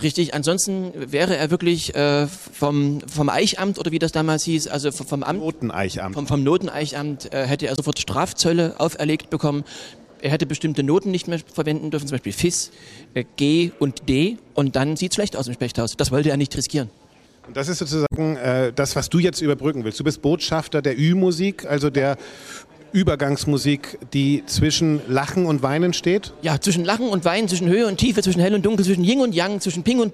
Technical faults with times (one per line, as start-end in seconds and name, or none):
7.75-7.79 damaged data in a compressed stream
18.07-18.18 damaged data in a compressed stream